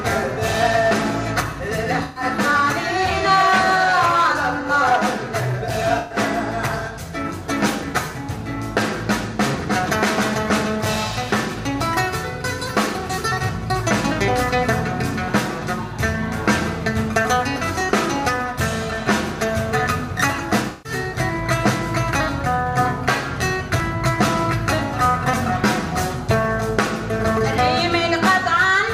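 The audio has three brief smeared, noisy, phasey patches at 2.03 to 2.24 s, 5.98 to 6.18 s and 20.70 to 20.92 s. Each lasts about 0.21 to 0.23 s. This is AAC frame loss with concealment: the decoder rebuilt the missing stretch from the last good spectrum, which fits six or seven lost frames each time. Separately, tiny skips occur at 5.82, 11.81, 17.81 and 23.8 s, about 6 s apart, each dropping only a few milliseconds with the two sides butted together. That regular spacing points to audio missing between chunks, likely from a recorder or processor losing a sliver of sound at each 6 s chunk boundary.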